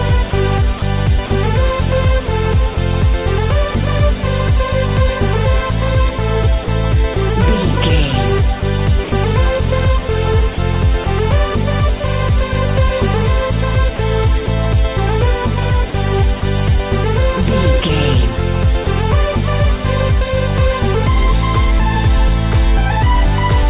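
A voice detector at the sending end, likely misjudging quiet passages as background, switched transmission off and on repeatedly, chopping the sound at 0.3–1.3 s, 2.26–2.76 s, 6.64–7.16 s, 8.6–9.12 s, 10.54–11.06 s, 13.96–14.48 s and 15.9–16.42 s. Each time, short pieces totalling 40 to 100 ms were replaced by generated comfort noise, so the sound turns choppy.

At 18.84–18.86 s the detector likely again treated live sound as background and stopped sending. This sound dropped by the voice detector is a single 20 ms gap filled with steady comfort noise before the signal resumes. All of this passes through a narrowband call path that leaves nothing above 4 kHz.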